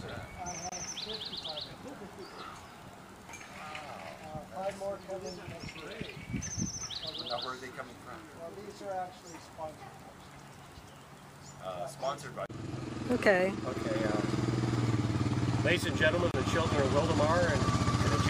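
At 0.69 s the sound drops out for about 26 ms, then picks up again at 0.72 s right where it left off. The same thing happens from 16.31 to 16.34 s, this time about 28 ms. Both are a gap at a join of encoded pieces: separately encoded chunks got stitched together without trimming the encoder's leading delay and last-frame padding. You hear a brief hole whose edges are smeared by the codec.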